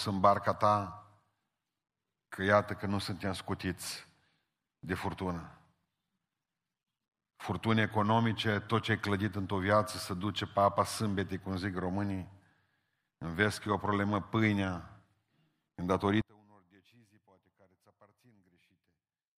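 At 16.22 s the speech drops by about 34 dB and stays down until the clip ends at 19.38 s. The collapse is sudden, not a fade. The likely cause is one channel inverted. One side of a stereo source had its polarity flipped. When the two sides were summed to mono, everything they shared cancelled. Only the small difference between them survives. That residue is what remains audible for the final three seconds.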